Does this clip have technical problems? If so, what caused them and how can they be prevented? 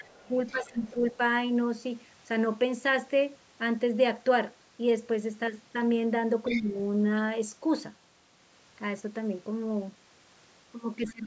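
Yes. Other side's voice leaking through: the echo canceller likely left part of the loudspeaker signal in the microphone. A faint second voice sits under the speech from 0.00 to 1.12 s, much louder from 6.45 to 6.70 s, and faint again from 11.02 to 11.12 s. Better acoustic separation, a headset, or a well-converged echo canceller would prevent it.

Speech suppressed in double talk: with both sides talking, the canceller likely could not tell the talker from the echo and turned everything down. The speech dips deeply at 0.03 to 0.20 s, moderately at 0.51 to 1.14 s, mildly at 6.49 to 6.76 s, and deeply again from 11.12 s to the end. A double-talk detector that holds suppression back while the near talker is active, or a headset that removes the echo, would prevent it.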